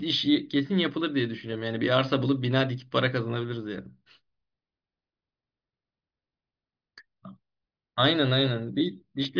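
There are no technical faults to describe in this speech clip, so there is nothing to place in time order.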